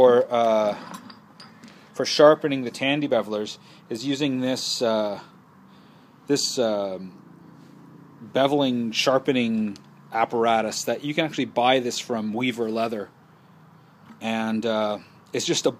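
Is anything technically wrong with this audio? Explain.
No, nothing stood out as technically wrong when listening to this audio.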